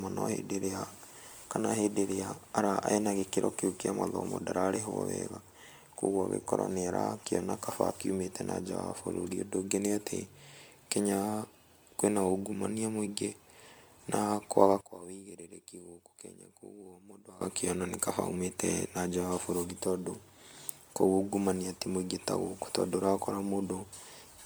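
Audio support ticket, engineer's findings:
Swirly, smeared, hollow speech throughout, with soft blurred consonant attacks and nothing above 19.9 kHz. Likely generation loss: repeated MP3 decode/re-encode at 128 kbit/s, around ten passes, each requantising on a shifted frame grid so noise and spectral holes accumulate.

14.81–17.41 s, right after "na kwaga": speech collapses to a faint residue, about 18 dB down. Likely one channel inverted. Reversed polarity on one side cancels the centred speech when summed to mono, leaving only the small left/right difference.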